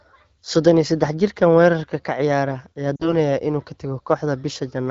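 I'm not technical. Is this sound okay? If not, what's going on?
No. Around 2.96 to 3.15 seconds there is a short glitch caused by lost AMR speech frames. Radio errors corrupted a tiny slice of the call, so the phone's decoder filled the gap by repeating the last good piece of sound while turning it down. You hear the voice fade to near silence, and it sounds weak or rough for a moment as it recovers. The gap points to roughly two lost 20-millisecond chunks on an HD Voice call.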